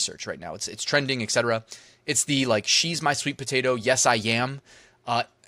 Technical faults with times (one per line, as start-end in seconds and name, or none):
none